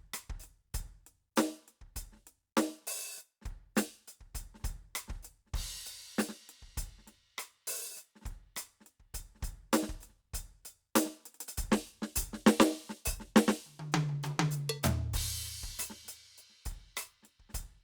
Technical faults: none

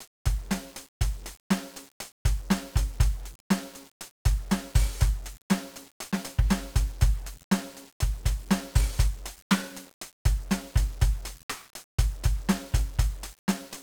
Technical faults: 1-bit DFPWM compression

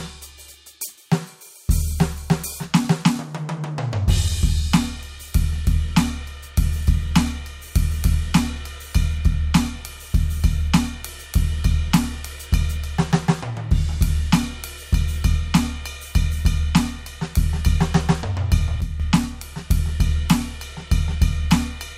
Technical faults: sudden gain jump

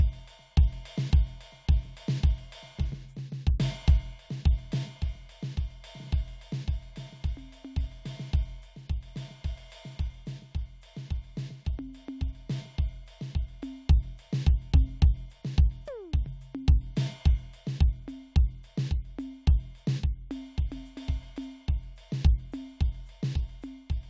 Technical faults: none

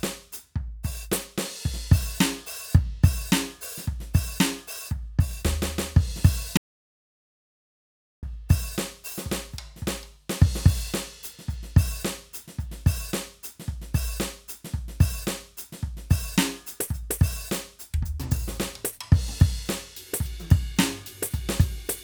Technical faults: audio dropout to silence

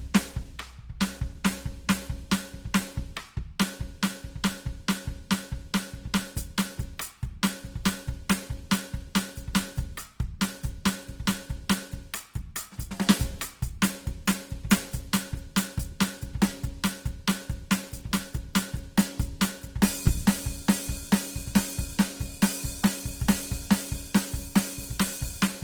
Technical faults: Opus compression

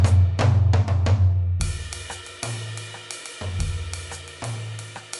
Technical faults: MP3 compression

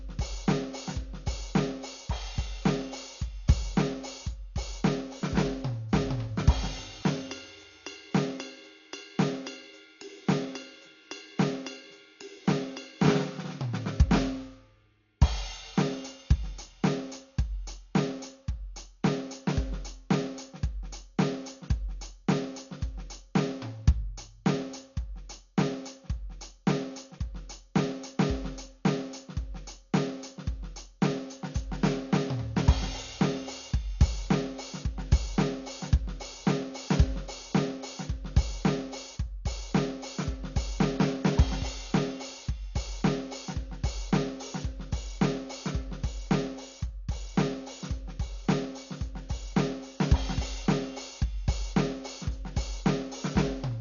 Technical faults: Dolby Digital compression

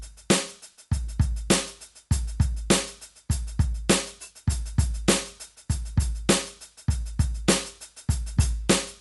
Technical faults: Dolby Digital compression

